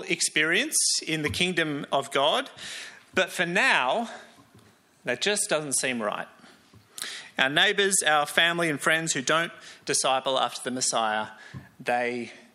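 No technical faults are audible.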